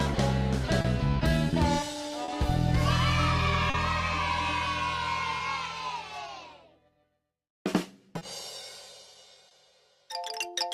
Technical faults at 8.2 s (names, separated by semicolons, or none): clock drift between sender and receiver; repeated timing corrections; short stall from a late packet